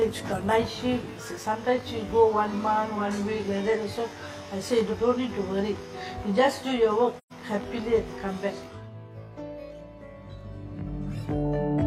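From the start and through the whole clip there is channel delay with comb filtering. One channel runs late by roughly 20 ms, and when the two are summed to mono the shared content cancels at evenly spaced frequencies. The first notch sits somewhere around 30 Hz, and the rest repeat up the spectrum. The result is a fixed rough, slightly doubled colouration that never shifts.

At 7.18 s an AAC frame loss with muting cuts in and lasts until 7.33 s. About 128 ms of audio has been zeroed by the decoder, a span that fits roughly three lost frames. The overlapping transform windows taper the sound down into the gap and bring it back up afterward. What you hear is a soft-edged dropout.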